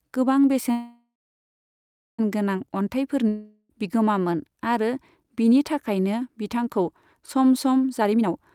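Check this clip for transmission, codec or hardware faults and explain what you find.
Three network-related faults are audible in this speech.

A call audio freeze runs from 0.71 to 2.20 s. The last sound is stretched into a fading buzz, then about 1.1 s of silence, most likely because delayed packets emptied the jitter buffer. Speech resumes where it stopped, with nothing lost, unlike a dropout.

A long network dropout follows from 3.28 to 3.71 s, just before "बिगोमामोन आरो". A brief fading buzz covers the gap, likely from packets that never arrived. Unlike the freeze, about 0.42 s of speech is gone, so the sound jumps ahead rather than continuing.

A jitter buffer speed-up occurs from 7.89 to 8.39 s, right after "बिथांखौ सम सम". The receiver trimmed repeated pitch-period slices, about a fifth of a second in total, to reduce its backlog. Speech runs at roughly 140% speed but keeps its pitch, sounding hurried rather than chipmunk-like.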